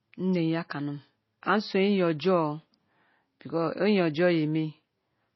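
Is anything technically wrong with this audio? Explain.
Yes. Throughout the speech, nothing is present above about 5.8 kHz, and the sound carries the smeared, band-limited character of a low-bitrate MP3. This is likely low-bitrate audio saved at a high bitrate: the later, larger encoding cannot restore detail the first encoding already removed.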